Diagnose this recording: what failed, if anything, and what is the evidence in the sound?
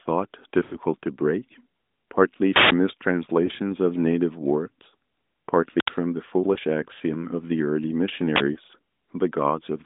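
Lost AMR speech frames, a network fault. The speech smears and fades at 0.64 to 0.76 s, with brief warbles at 3.46, 6.54 and 8.54 s. The decoder replayed stale frames.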